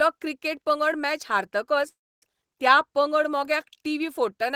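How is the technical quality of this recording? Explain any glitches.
One glitch breaks the recording: a call audio freeze from 1.88 to 2.23 s. The last sound trails off briefly, then about 280 ms of silence follows. Speech resumes where it stopped, nothing lost, just delayed by 335 ms, likely from a jitter buffer running dry. The waveform shows a flat gap, the spectrogram a blank vertical band.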